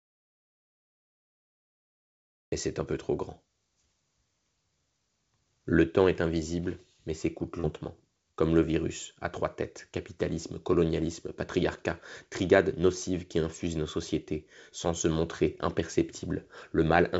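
From 0 to 2.52 s, an audio dropout to silence: plain silence, a flat waveform line and an empty spectrogram, likely from lost input, until "c'est un peu trop" begins.

At 7.60 s, after "est invisible mais s'écoute", short concealed packet loss: about 40 ms went missing and was filled by synthesised continuation, heard as a brief smear, showing as smoothed, blurred harmonics. The call path leaves nothing above 8 kHz, which fits a 64 kbps G.722 codec.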